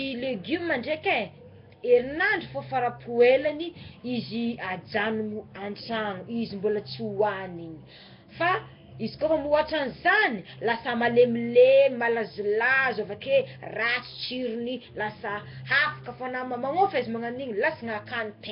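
Speech runs the full clip with heavy Nellymoser compression, likely from Flash's old microphone codec. A rough, hissy halo and a smeared, underwater quality sit on every phrase, which fits a rate near 22 kbps. Quiet bands starved of bits are filled with noise, while fixed short blocks blur the timing. On a spectrogram nothing appears above 5.3 kHz, and the region below shows grainy, speckled noise patches instead of clean harmonic lines.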